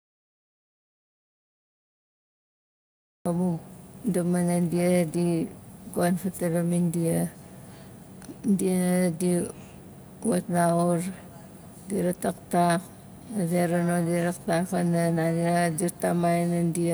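The input to the recorder was likely lost before the take began, with silence written in its place: this speech clip opens in an audio dropout to silence already under way, dead silence with no room tone until sound cuts in mid-flow at 3.26 s.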